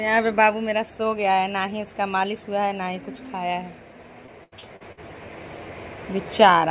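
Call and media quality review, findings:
Choppy, robotic stutter with short holes, 4.26 to 4.99 s. Repeated packet loss (robotic sound): jitter buffer concealment stretches the last audio over gaps up to 81 ms, about 29% of span patched. Band-limited to 4 kHz throughout, consistent with G.711 A-law.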